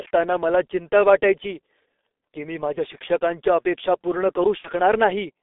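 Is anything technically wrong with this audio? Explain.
Yes. The whole clip passes through the G.723.1 codec, and at 4.58 s there is a burst of VoIP packet loss concealed by the speech codec.

G.723.1 codec, throughout: a low-rate telephony coder models the speech in coarse 30 ms frames. Its heavy smearing fits roughly 6.3 kbit/s, and the band is held to 300 Hz to 3.6 kHz. The speech sounds muffled and hoarse, with consonants blurred together.

Packet loss, 4.58 to 4.70 s, just after "माझ्या शिक्षकांच्या अपेक्षा पूर्ण": about 60 ms of data goes missing, which points to two lost frames. The decoder fills the gap by extending its last pitch and filter at falling gain, so the sound is stretched and fades, and the voice stays weakened for a while after the packets return at 4.70 s.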